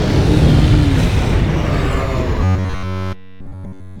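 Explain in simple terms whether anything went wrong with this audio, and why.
Robotic sound from repeated short buffers, from 2.44 s to the end. The audio becomes a rigid 94 Hz buzz, likely from one 11 ms chunk being replayed over and over.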